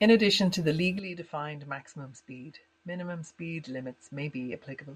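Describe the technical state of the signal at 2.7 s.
At 2.7 s the input has likely switched to a poorer device, a change running from 0.99 s to the end with no gap: nothing passes above 8.6 kHz, the level sits about 10 dB lower, and a faint new noise floor leaves the speech duller.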